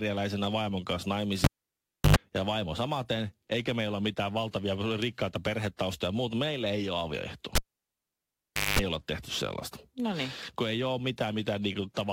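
A speech clip with two cases of a cable pulled and plugged in. After "vaimon kanssa" a pop at 1.44 s cuts the sound for about 0.67 s. A 50 Hz mains buzz of about 95 ms follows as the plug tip touches. A second pop brings back "ja vaimo samaten eikä" at 2.16 s. After "ei ole avioehtoa" the same happens from 7.55 to 8.79 s, with about 1.19 s of near silence and about 208 ms of buzz before "olla tehty sellaista".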